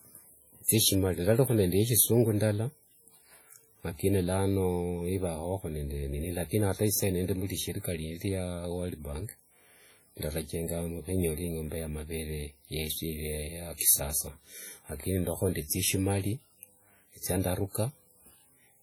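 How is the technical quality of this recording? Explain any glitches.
The technical quality is poor: heavy compression damage runs through the whole speech recording.

WMA compression, throughout: the speech has a ringing, washy character, with a hiss that swells and fades along with the signal. The likely cause is a transform codec such as early Windows Media Audio at a low bitrate, which fits roughly 32 kbps. Its long blocks smear quantisation noise over tens of milliseconds, and weak spectral lines are discarded. A spectrogram would show blotchy, patchy energy with holes between components and faint smearing around syllable onsets, though content still reaches about 20.1 kHz.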